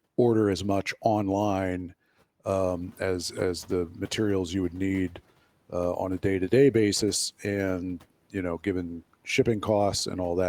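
At 2.44 s the background noise in the room jumps by about 11 dB, at roughly two and a half seconds in, and the noise suppressor is caught catching up. Its estimate of the noise floor still reflects the quieter level, so the louder noise passes through with little reduction at first. Over the next 320 ms, to 2.76 s, the estimate adapts and the noise sinks by about 6 dB, settling about 27 dB under the speech.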